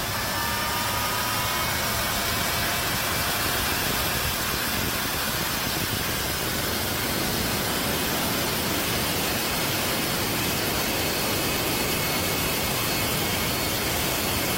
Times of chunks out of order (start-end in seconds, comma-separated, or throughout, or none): none